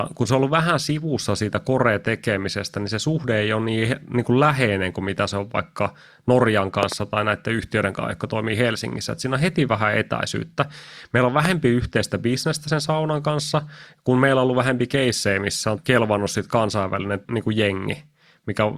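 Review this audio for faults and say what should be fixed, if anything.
Three loud pops, in two bursts, sit on top of the speech. At 6.83–6.94 s there is a double pop, well above the speech level, just before "tai näiden yhtiöiden kanssa". At 11.45–11.47 s there is a single, even stronger pop, just before "yhteistä bisnestä sen saunan". Each is a brief voltage pulse, likely from a connector, switch or static discharge, that the following circuits turn into a thump. Unlike a dropout, the speech carries on intact underneath. To prevent these, secure cables and connectors, control static, and avoid switching gear while recording.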